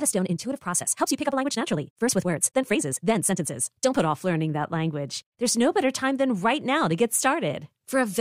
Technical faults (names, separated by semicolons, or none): time-stretched section